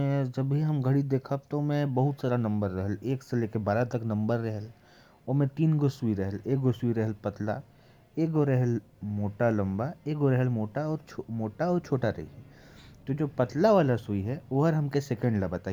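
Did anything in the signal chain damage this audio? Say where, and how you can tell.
No, nothing in this speech recording stood out as damage from any stage of the signal chain on listening.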